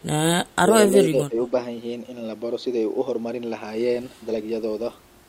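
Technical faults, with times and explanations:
0.91–1.37 s, speech suppressed in double talk: the speech is turned down in short pieces totalling around 200 ms, by as much as about 15 dB, likely from an echo canceller treating it as loudspeaker echo. The waveform shows notched, shrunken stretches; the spectrogram fades there.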